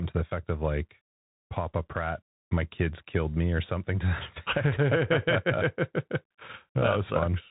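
From start to finish the speech runs through a Bluetooth CVSD headset codec, and you can plainly hear it. Nothing gets past about 3.8 kHz, so the top end is just gone. On top of that, CVSD tracks the waveform with one up-or-down bit per step and an adaptive step size, so it can't keep up with fast, loud changes. That's where the audible grit and distortion come from. The sound fits a 64 kbps CVSD stream.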